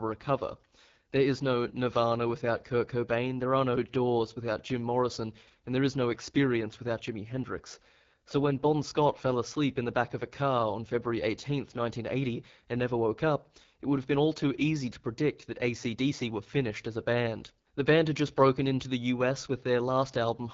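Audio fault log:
Throughout: AMR wideband (HD Voice) codec. The speech sounds rough and raspy, and nothing is present above 7.6 kHz. The roughness points to one of its two lowest modes, such as 8.85 kbit/s. Unlike narrowband AMR, sibilants keep some high-frequency air.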